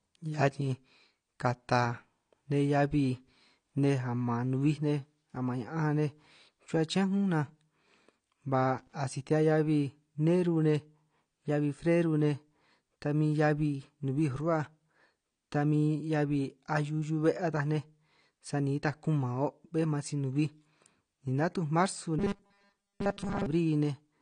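Throughout the recording the speech is band-limited, with nothing above 9.7 kHz, and the coding damage is plainly audible. Sibilants and sustained vowels take on a smeared, swirling texture, and the top end sounds dull. The likely cause is AAC compression at a low rate, with AAC-LC lowering its cut-off and coarsening quantisation across its frequency lines to save bits. The bandwidth and artefact level fit a bitrate around 32 kbps.

From 8.79 to 8.93 s, a short irregular burst of scratching and crackle cuts across the signal for about 140 ms. This is loose connector crackle: a contact in the signal path briefly makes and breaks, chopping the audio into fragments, and any DC offset on the line turns each break into a pop.

Between 22.19 and 23.46 s the speech turns into a rigid, metallic buzz at 200 Hz that still loosely tracks the syllables. This is robotic sound from repeated short buffers, likely caused by new audio arriving too slowly so that the last short chunk is replayed in its place. 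A 200 Hz buzz means a 5 ms repeat, which fits a buffer of that length. Most of this stretch is repeated material rather than fresh audio.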